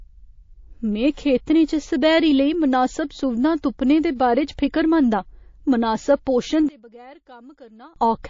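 The whole clip has a watery, swirling texture. The sibilants chirp metallically. Quiet frequency detail flickers in and out from frame to frame. This is plainly audible MP3 compression damage. The likely cause is an encoder starved of bits, which fits a low bitrate near 32 kbps. The encoder has zeroed weak lines to save space.

From 1.14 to 1.17 s, a short hiss sits just ahead of a sharp attack. This is pre-echo. It lasts 31 ms, and the noise rises about 21 dB above the quiet before it. The codec spread its quantisation noise across a 72 ms block. Short blocks were never used, so the noise for the loud onset leaked backward. The attack sounds soft and smeared.

Pre-echo returns from 4.15 to 4.20 s. This time it spans 46 ms, with a rise of about 14 dB. It is quieter than the first, but the same long-block smearing blurs the onset.

From 6.69 to 7.96 s, the speech nearly vanishes when heard in mono. 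The level drops about 26 dB. What remains is faint. The cause is likely one channel inverted. The reversed polarity cancels everything common to both channels, including the centred voice.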